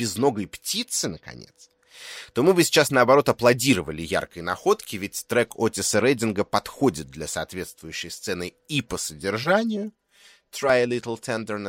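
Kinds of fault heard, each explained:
channel delay (comb filtering): one channel arrives roughly 5 ms late and both are summed to mono, so shared content cancels at evenly spaced frequencies from around 100 Hz upward. The speech turns hollow and phasey from 9.44 to 10.70 s, just after "соответствующей сцены и по".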